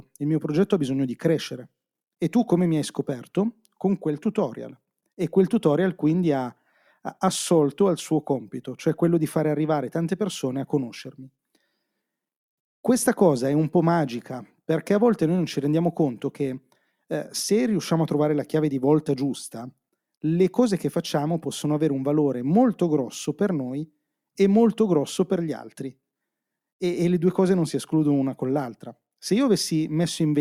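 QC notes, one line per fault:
No faults heard in this speech recording on review.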